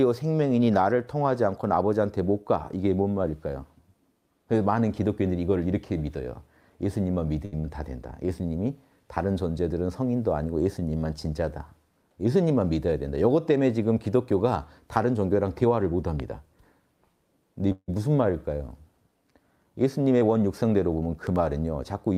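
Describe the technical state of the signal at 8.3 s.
At 8.3 s there is a jitter buffer slow-down, running from 8.12 to 8.48 s. The receiver repeated pitch periods to rebuild its reserve, adding 36 ms. Playback drops to about 92% speed at unchanged pitch, so the sound drags slightly.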